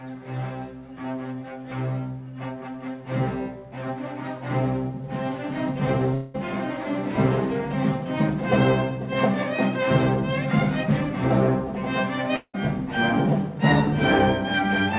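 At 6.14 to 6.36 s and 12.36 to 12.56 s, about 0.2 s of audio vanishes, likely a long network dropout. A fading buzz fills each gap. The second ends in brief silence. The band stops at 4 kHz.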